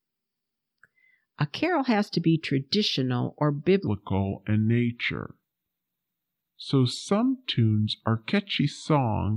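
Playback likely ran on a mismatched clock from 3.87 s onward: a section at the wrong speed, 0.78x, slow and roughly four semitones deep.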